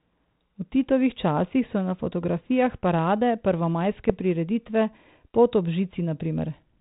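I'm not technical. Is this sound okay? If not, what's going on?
No. There are bit errors on an ADPCM link at 1.10 to 1.14 s, just before "časih so na fotografijah", and again briefly at 4.10 s. This speech travelled over a cordless-phone-style digital link that sends only small changes from one moment to the next. When a few bits arrive flipped, the receiver's running estimate goes wrong and takes a moment to recover. That is why you hear short pops and rough bursts with quick jumps in loudness.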